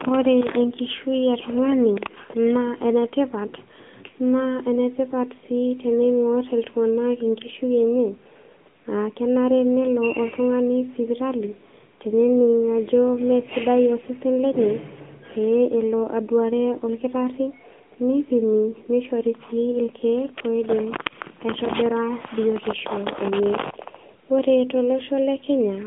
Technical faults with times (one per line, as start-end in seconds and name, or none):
0.00-25.87 AMR narrowband mobile codec